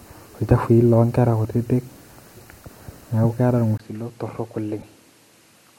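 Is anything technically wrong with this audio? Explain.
Yes. From 3.78 s to the end, after a 20 ms gap, the speech drops about 10 dB and loses everything above 13 kHz. This is likely an input switched to a poorer device, with a new noise floor roughly 35 dB down. A spectrogram shows a flat top edge there.

At 4.80 to 4.85 s, a corrupt frame decoded across a couple of frames puts misplaced energy near about -30 dBFS. It sounds like a brief chirp, squeak, blip or burst of noise and appears as a stray spectral smear.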